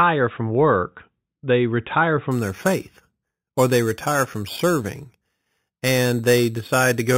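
From 2.31 s, imaging from sample-and-hold upsampling adds a metallic fizz about 15 dB down. The spectrogram shows speech mirrored into 4 to 8 kHz, and the waveform looks stair-stepped.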